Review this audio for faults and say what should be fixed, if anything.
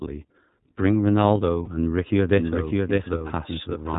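The whole clip carries the iLBC codec: nothing above 4 kHz survives, and the speech has a rough, synthetic edge, consistent with the 30 ms frame mode at about 13.33 kbps. Unlike a plain low-pass filter, the roughness sits inside the band, in how the excitation is coded. Sending the speech through a wideband codec would avoid this.

Lost iLBC frames appear at 1.64 to 1.68 s and 3.18 to 3.21 s, each a 30 ms gap. The decoder fills each gap with a held, slightly buzzy vowel-like tone. Clean speech returns immediately afterward, because each iLBC frame decodes independently, unlike codecs whose damage smears into the frames that follow. Better jitter buffering or redundancy (FEC) on the network path would prevent these gaps.

From 2.37 s to the end there is a doubled audio track. A full-band copy of the speech runs roughly 0.7 s behind the original at about 5 dB quieter. It starts abruptly and has no decay or room colour, which separates it from reverb or acoustic echo. 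This is likely caused by a second, slower capture path or by an edit that left two offset copies. Removing the duplicate source or the duplicated region in the edit would fix it.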